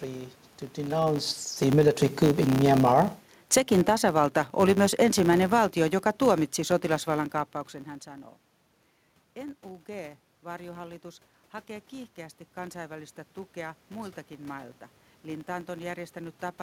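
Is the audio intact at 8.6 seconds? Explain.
No. At 8.6 s, as throughout, the filter restarted on every block: it starts each 10 ms block from silence, leaving a level-following 100 Hz buzz.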